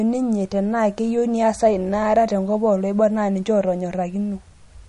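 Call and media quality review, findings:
Likely MP3 encode at low bitrate, roughly 40 kbps judging by the damage, applied across the whole speech clip. Encoder starving for bits: hard treble cut, nothing above 10.6 kHz; weak spectral lines zeroed and toggling frame to frame. Result: plainly audible MP3 compression, dull top end, watery swirl, smeared consonant attacks.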